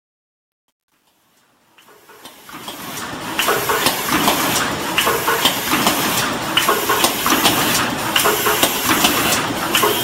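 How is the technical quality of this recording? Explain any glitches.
Two faults stand out: a gritty opening during the fade-in and a run of regular ticks near the end.

From 0.0 to 3.49 s the fade-in shows truncation distortion, worst from 0.0 to 2.59 s. Without dither, the quietest part becomes coarse square steps, consistent with about 10 bits. It sounds gritty and grainy. Unlike steady noise, the grit fades away as the level rises.

From 8.08 to 9.98 s there are periodic USB or driver dropouts. Every 0.1 s, roughly a millisecond of audio becomes silence, about twenty times, likely because a background task stalls the bus or driver. Strict, clock-like spacing separates these ticks from random clicks.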